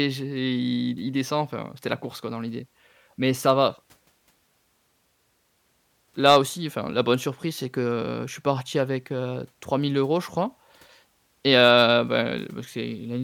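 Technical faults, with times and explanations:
3.49, 6.26–6.37 and 11.56–11.84 s, hard clipping: speech peaks overdriven about 1, 4 and 1 dB are sliced flat, giving abrupt crackle with high harmonics rather than the rounded warmth of soft saturation.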